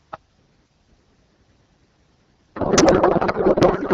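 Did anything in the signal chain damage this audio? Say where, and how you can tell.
Yes. The damage is at the codec stage, a codec payload misread starting at 2.55 s and running to the end of the clip. Before that point the AMR wideband speech at 12.65 kbit/s sounds clear, with only light coding softness. From 2.55 s the speech turns into garbled noise and warble that barely tracks it. The cause is a packing mismatch. Octet-aligned AMR frames are being parsed as bandwidth-efficient, so every field is read from the wrong bit positions.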